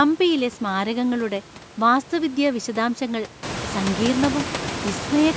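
The speech has no technical fault: it has been through a call's microphone processing, which leaves nothing above 8 kHz and trims the lowest bass as normal, and the background noise in the room rises by about 16 dB at around three and a half seconds but stays about 10 dB below the speech.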